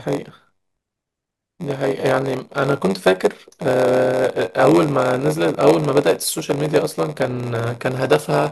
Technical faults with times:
0.00-8.51 block size mismatch (padded)

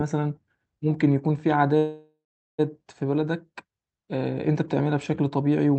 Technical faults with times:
1.77-2.60 call audio freeze

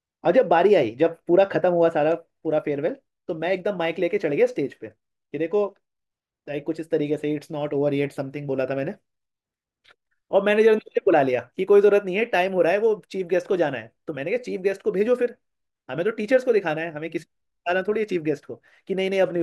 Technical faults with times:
none

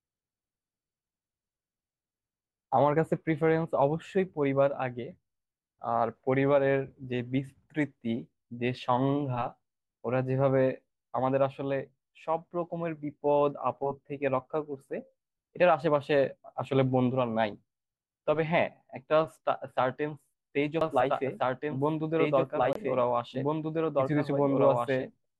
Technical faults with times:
20.81-25.40 doubled audio track
22.73-22.76 digital broadcast dropout

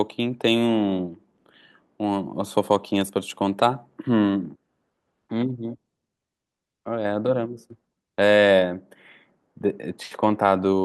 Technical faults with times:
none

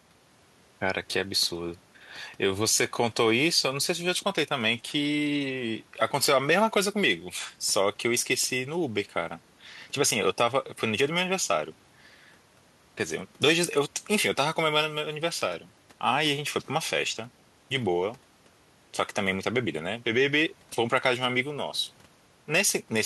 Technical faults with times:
none

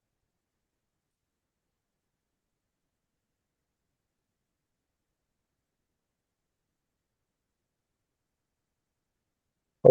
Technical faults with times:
8.33-9.10 repeated frames

